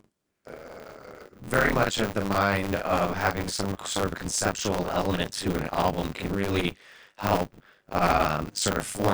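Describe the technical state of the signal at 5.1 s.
At 5.1 s the speech carries buffer tearing, present throughout. Writer and reader cross every period, so about half of each buffer replays audio from a few tens of milliseconds earlier. This makes a robotic 100 Hz buzz.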